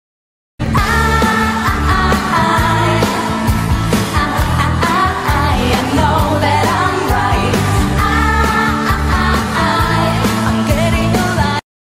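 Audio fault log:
Nothing stood out on listening.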